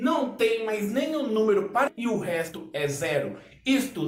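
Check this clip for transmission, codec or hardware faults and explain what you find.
Two transmission faults are present, at least one tied to the receiver's jitter buffer.

At 1.87 s there is a skip ahead: roughly 0.7 s of audio was dropped, so the sound jumps forward directly, with no silent gap like a dropout.

From 1.97 to 3.96 s a jitter buffer speed-up runs at 110%, trimming pitch-period slices totalling about 0.2 s. It sounds hurried, but the pitch stays unchanged, unlike a resampling error.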